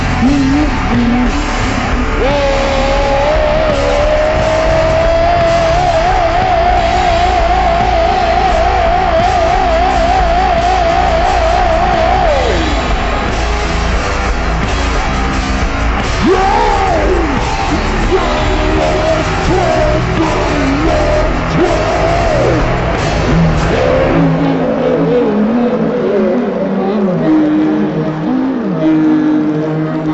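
The whole clip has a wrong sample rate: everything runs at half speed and sits a full octave (12 semitones) low. That fits material recorded at 44.1 kHz being played back at 22 kHz with no conversion, so speed and pitch drop together.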